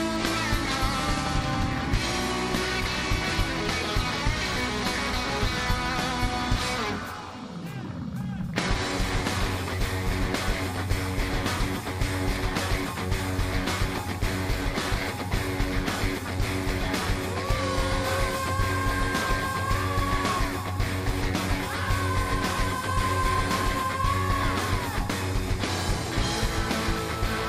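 No technical faults can be heard in this audio: the signal runs without any dropout, distortion or other audible defect from its first moment to its last.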